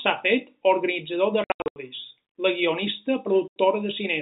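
Between 1.44 and 1.76 s, packet loss filled with silence chops the speech: about 260 ms goes missing across that 320 ms span, in short holes up to 80 ms long, which fits 20 ms packets. The receiver inserted digital silence rather than concealing the gaps, so each hole starts and stops abruptly. A single 80 ms dropout of the same kind recurs at 3.48 s. Around it, the 4 kHz telephone band of G.711 coding is audible.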